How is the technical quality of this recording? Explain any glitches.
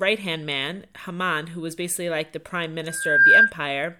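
The recording is marred by a loudspeaker feedback squeal. From 2.87 to 3.53 s, a microphone picks up its own loudspeaker and the loop gain at 1.6 kHz tops unity. The tone swells over around 0.4 s to roughly 15 dB above the speech. A spectrogram shows a bright horizontal line at 1.6 kHz. The waveform shows a growing sinusoidal envelope.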